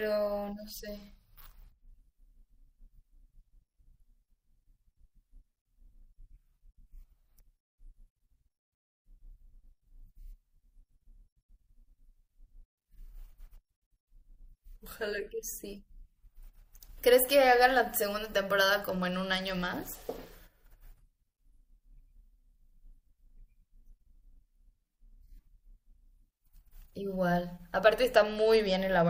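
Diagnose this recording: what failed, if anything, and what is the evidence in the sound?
Bluetooth SBC bit pool drop (codec) at 0.45–1.88, 18.90–20.31 and 28.15 s onward. Starved top sub-bands dull and roughen the speech, fitting a bit pool fall from 31 to 12, and the spectrogram's treble thins out.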